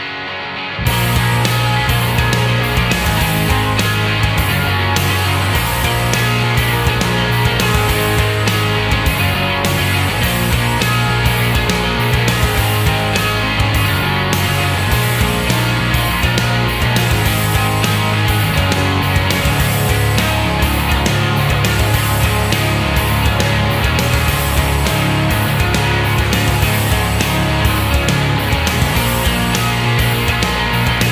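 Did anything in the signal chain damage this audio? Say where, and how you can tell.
No, nothing in the signal chain damaged this audio.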